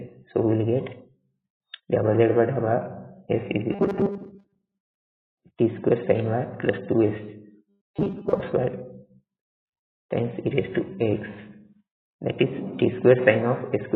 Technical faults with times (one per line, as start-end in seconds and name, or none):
0.08-0.35 sound cut by the noise suppressor
0.95-1.38 sound cut by the noise suppressor
3.72-4.89 robotic sound from repeated short buffers
4.32-4.65 sound cut by the noise suppressor
7.69-8.41 robotic sound from repeated short buffers